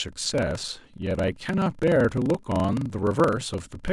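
Throughout, a padded block size mismatch zero-fills each block's tail, giving a 23.4 Hz buzz and 0.938x speed at normal pitch; spectrograms show vertical gaps.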